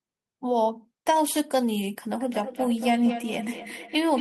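From 2.17 s to the end, a feedback echo between two devices sets in. A second device in the room replays the sound, and the first microphone picks it up again. Each word returns about a fifth of a second later, reaching about 7 dB below the speech.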